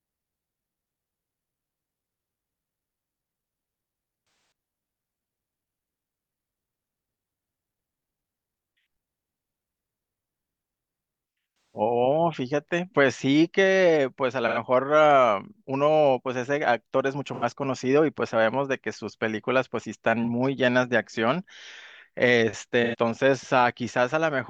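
AAC frame loss with concealment occurs at 4.20 to 4.80 s, 11.74 s, 14.47 s, 17.33 s, 20.23 s and 22.84 s. Missing frames are rebuilt from the last good spectrum, giving brief smeared, phasey patches in the speech. The first patch spans about 0.6 s, with its longest gap about 150 ms.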